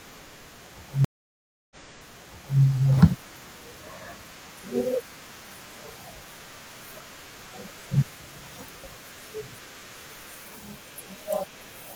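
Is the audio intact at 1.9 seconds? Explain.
No, 1.9 s falls within a stream reconnect (1.05 to 2.60 s). The waveform flatlines for 662 ms, then the new decoder replays speech from 0.9 s earlier.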